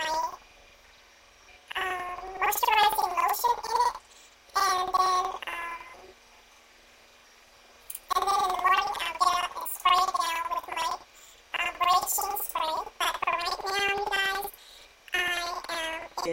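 Planar audio read as interleaved throughout: each block of about 93 ms, fitting 4096-sample buffers, plays twice at double speed, an octave high, fluttering at 10.8 Hz.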